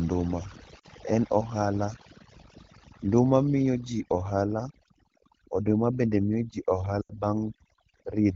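Overdone noise removal runs through the whole clip. The noise suppressor was set too hard. It pulls single frequency bands down whenever they sit near its noise estimate. The background drops and breaks up into twinkling specks.

Lost AMR speech frames come at 0.79 to 0.85 s, just before "en ohala". The gap fits two lost 20 ms frames. The decoder repeats its last settings at falling gain, so the sound drops to near silence.

At 7.02 to 7.19 s, after "oduma bende miyo jii", a longer run, fitting about four frames, drops to near silence within two frames before the sound returns weak or rough.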